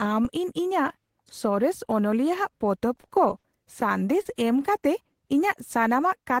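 From 2.95 to 3.84 s, repeated packet loss (robotic sound) sets in. Packets keep arriving late or not at all, and the decoder patches each hole, the longest about 40 ms, by extending the preceding speech. About 130 ms of that stretch, roughly 15 percent, is synthesised, giving a choppy, mechanical quality.

At 4.21 to 4.28 s comes a short concealed packet loss. About 40 ms of the stream failed to reach the decoder in time, so the receiver carried the last sound forward and blended back in, leaving a brief smear across the speech.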